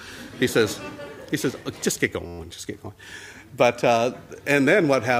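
At 2.26 s the system hangs and the sound hardware keeps replaying its ring buffer, a system hang loop lasting until 2.39 s. An 11.6 ms slice, which fits a 512-sample buffer, repeats eleven times, producing a steady 86 Hz buzz.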